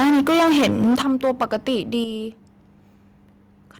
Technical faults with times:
0.00-1.99 microphone overload
1.02 microphone volume stepped down
2.04 microphone volume stepped down

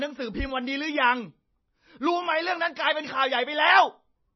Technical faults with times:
0.00-4.36 MP3 compression

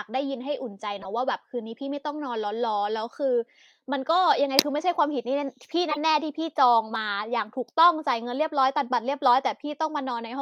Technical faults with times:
0.98-1.06 corrupt frame decoded
5.89-5.97 corrupt frame decoded

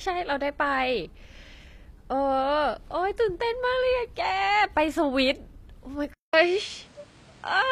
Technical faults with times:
0.00-7.72 HE-AAC compression
6.14-7.72 input switched to a poorer device

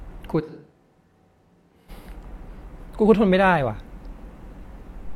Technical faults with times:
0.42-1.88 switch to a distant microphone

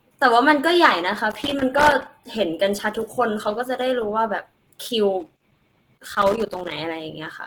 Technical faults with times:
0.00-7.46 Opus compression
1.31-2.06 loose connector crackle
5.20-6.72 loose connector crackle

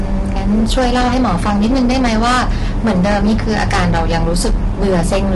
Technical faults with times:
0.00-5.36 hard clipping
0.00-5.36 low-delay AAC compression

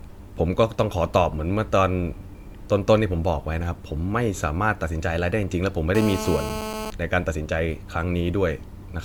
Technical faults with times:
0.00-9.04 generation loss
5.95-6.90 GSM phone buzz

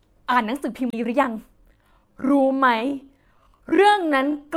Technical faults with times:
0.88-0.94 damaged data in a compressed stream
1.57-4.56 time-stretched section

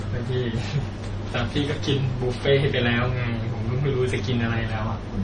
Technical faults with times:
0.00-5.23 transcoding between lossy codecs

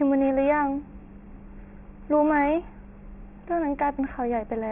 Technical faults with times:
0.00-4.71 aliasing

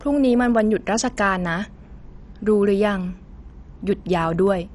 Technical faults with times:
0.00-4.75 MP2 compression

